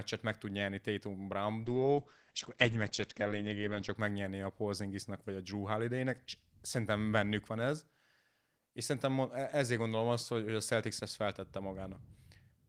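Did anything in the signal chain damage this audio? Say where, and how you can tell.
Yes. The damage is a call bitrate drop at the codec stage, from 1.65 to 4.01 s. Across that span the speech turns rough and muffled. The top end vanishes above about 8 kHz, where before it reached 20 kHz. The coarse quality holds for roughly 2.3 s, then clears. This fits the encoder being forced from around 32 kbps down to 11 kbps after the bandwidth estimate fell. It then coded more crudely and discarded the highs.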